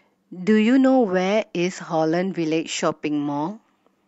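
No technical fault can be heard anywhere in this speech recording. There is no event in it that needs a time or an explanation.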